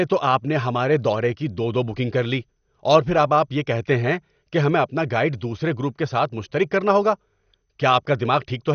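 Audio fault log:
Throughout, MP2 compression: the speech is dull, with nothing above 6.5 kHz and a gurgly, grainy edge, likely from starved sub-bands at a low bitrate around 48 kbps.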